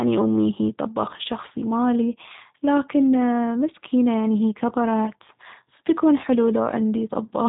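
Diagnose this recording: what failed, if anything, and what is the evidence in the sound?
The G.729 codec damage is plainly audible throughout the speech, at the codec stage. Nothing passes above 3.8 kHz, but unlike a simple band-limit, the voice is rebuilt from a filter and sparse pulses, giving a rough, synthetic buzz that fits an 8 kbit/s G.729A-class encoder.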